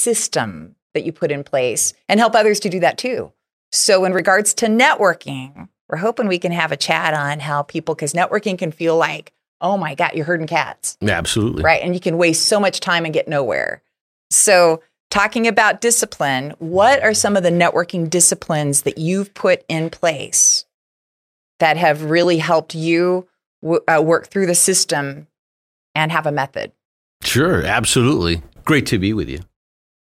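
Speech, with two blocks of digital silence where the output wasn't filled in time or a calculation produced invalid values. Each gap of about 1 to 1.5 ms cuts in and out abruptly, heard as a tick or dip rather than silence: at 4.19 s just before "to networking we're hoping", and at 22.24 s, about 1.45 ms long (consistent with a 64-sample block), between "that have" and "helped you".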